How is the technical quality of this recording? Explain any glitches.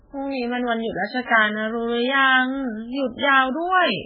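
The quality is poor: the speech is heavily degraded by compression from start to finish. Throughout the clip there is nothing above 5.1 kHz, and the sound is watery and swirly, with sibilants turned to metallic chirps and consonant attacks smeared. The likely cause is heavy MP3 compression at a very low bitrate, around 8 kbps. Starved of bits, the encoder discards the treble and zeroes weak frequency lines that flicker on and off between frames. A simple low-pass filter would also remove the top end, but it would not produce this frame-to-frame swirl and chirping.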